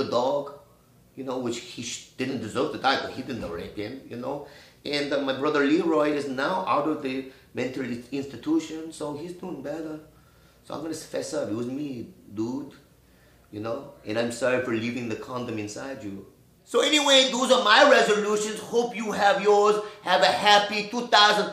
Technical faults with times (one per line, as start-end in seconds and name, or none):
0.00-21.52 block size mismatch (truncated)